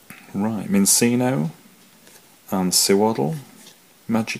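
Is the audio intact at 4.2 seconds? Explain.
Yes, at 4.2 seconds the audio runs on intact, with no dropout, click, glitch or other audible fault at that point.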